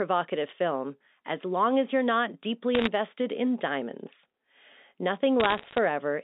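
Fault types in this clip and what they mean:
Bit errors on a digital phone line: flipped bits in the mu-law stream, each one knocking a single sample off its proper value, and the hits on sign or high-order bits come out as sharp ticks. You get a short burst of crackle around 2.75 to 2.87 s, between "as you're not deeply" and "in diamonds", then a longer spell from 5.4 to 5.78 s, with the speech underneath untouched. The density suggests an error rate of around one percent or a bit under.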